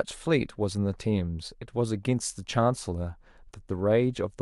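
Speech, with nothing technically wrong with it.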